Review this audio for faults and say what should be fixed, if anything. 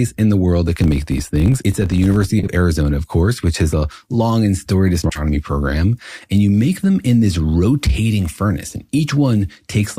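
From 0.76 to 2.28 s there is a steady 50 Hz buzz riding on the speech. It grows louder and softer with the speech level. This is a filter restarted on every block. The filter drops its stored state at each block boundary and starts again from silence. Each block therefore opens with a small transient. Those transients repeat fifty times a second, which points to blocks about 20 ms long. Prevention: keep the filter's state across blocks instead of resetting it.

Two short garbled flutters follow. These are frames out of order. The first runs from 2.39 to 2.48 s. Two neighbouring 40 ms stretches play swapped, which fits two frames on each side. The second runs from 5.03 to 5.21 s. Here two 60 ms stretches are exchanged, which fits three frames each. Nothing is lost in either case. Prevention: reorder frames by sequence number before decoding.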